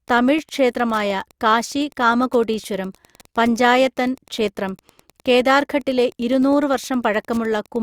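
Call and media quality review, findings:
Wi-Fi interference, throughout the clip. Steady faint ticking under the speech, about ten clicks per second, repeating every 102.4 ms, around 35 dB below the speech. Probable component: an unshielded mic preamp or analogue input near a Wi-Fi radio. Mechanism: the input circuitry rectifies the radio's periodic beacon transmissions, turning each RF burst into an audible tick. Check the radio's placement, the shielding and the cable routing.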